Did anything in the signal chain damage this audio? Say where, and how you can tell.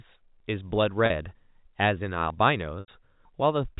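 Yes. At the driver or buffer stage, audio is likely missing between chunks: the recorder dropped a short piece, around 50 ms, at each hand-off. Skips land at 0.40, 1.35, 2.30 and 3.25 s, about one per second, which fits 1-second chunks, with the two sides butted together without silence.

On the network side, packet loss with pitch repetition appears at 1.06 to 1.10 s and 2.80 to 2.88 s. The receiver filled the 40 ms gap with a repeated pitch period, heard as a briefly held, buzzy sound. The 80 ms gap fades toward silence before the speech cross-fades back, all within the 4 kHz telephone band of the G.711 link.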